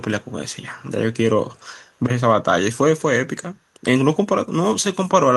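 A loudspeaker on one end of the call is likely leaking back through an echo canceller that failed to clear it, so the speech returns as an echo leak. It arrives 275 ms late and sits roughly 40 dB below the direct speech. The result is a very faint trailing copy, heard only in brief scraps: once from 0.21 to 0.32 s and again from 1.54 to 1.62 s.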